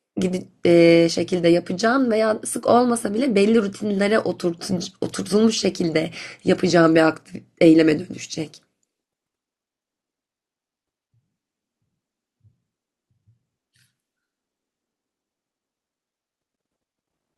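No technical faults can be heard anywhere in this speech recording. It has passed through a WebRTC call path that is working as it should, with the high end stopping at 12 kHz, which fits an Opus call setting.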